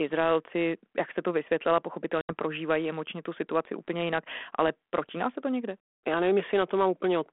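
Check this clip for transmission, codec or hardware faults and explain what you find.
One transmission fault is present. Between 2.21 and 2.31 s, after "jak se to vysvětlila" and before "prožívají emočně tu situaci", there is packet loss on an ADPCM call. About 80 ms, probably several packets, drops to hard-edged silence. The decoder's predictor and step size desynchronise, so the sound resumes with brief distortion.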